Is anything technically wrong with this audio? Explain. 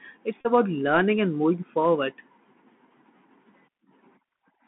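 Yes, a couple of things. The whole clip has the Bluetooth CVSD headset codec sound: the speech is squeezed into roughly 150 Hz to 3.4 kHz, with scratchy s sounds and a grainy hiss underneath, consistent with a 64 kbps CVSD link. From 0.41 to 0.46 s, just before "about learning and moving", a Bluetooth headset packet is repeated. About 37.5 ms of audio was lost and the same short chunk was replayed every 3.75 ms, giving a brief buzz near 267 Hz.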